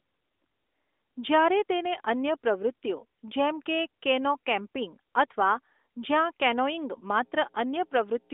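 At 6.50 s, right after "કેનો કેમ્પિંગ અથવા જ્યાં", mains hum starts and runs to the end at 8.33 s. It is a steady low tone at 60 Hz, sitting roughly 25 dB below the speech. Power-line current has leaked into the signal path, likely through a ground loop or a nearby transformer. The hum does not rise and fall with the talker. It sits under the narrow, phone-like band of the speech.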